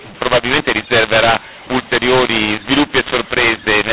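From start to finish the speech carries a mu-law and A-law mix-up: the audio was encoded with G.711 A-law but decoded as mu-law. Because the two logarithmic scales map codes to different amplitudes, levels come out scrambled, with some samples too loud, others too quiet, and the quietest lifted well above silence. The result is harsh, gritty distortion over the speech and a noise floor filling the pauses, all within a band that stops near 4 kHz, consistent with 8 kHz telephone sampling.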